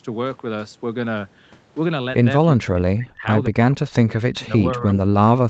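From 2.44 to 3.25 s the speech sinks by as much as about 30 dB, returns, then drops by about 40 dB at 3.49–3.56 s and again from 3.74 s to the end. This is likely speech suppressed in double talk: the echo canceller, hearing the far side at once, mistook the talker for echo and pushed both down. Unlike packet loss, the dips are attenuation rather than concealment artefacts, and they track the overlap.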